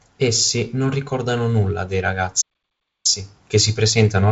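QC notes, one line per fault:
2.41–3.06 s, playback stall: after "non ricordano nulla dei" the speech drops to silence for 0.63 s and resumes at "che si", likely because the player ran out of buffered data.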